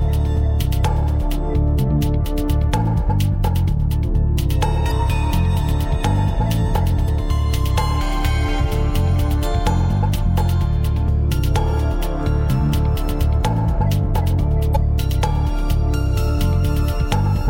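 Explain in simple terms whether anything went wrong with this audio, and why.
Three brief glitches, at 4.87–4.92 s, 7.04–7.09 s and 14.72–14.77 s, come from damaged data in a compressed stream. Part of the encoded file was corrupted, so the decoder briefly lost its place and produced a short blip each time before recovering.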